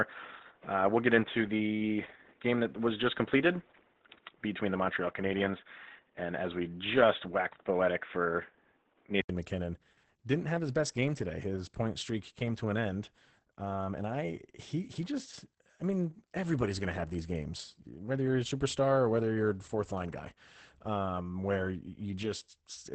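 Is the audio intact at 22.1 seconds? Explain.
No. Opus voice compression runs through the whole clip, including 22.1 s. The sound is cut off above 8.8 kHz. It is muffled, hoarse and slightly robotic, which fits low-bitrate SILK coding.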